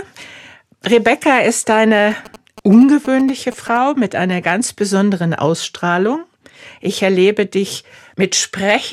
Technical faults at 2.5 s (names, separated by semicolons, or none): GSM signalling bursts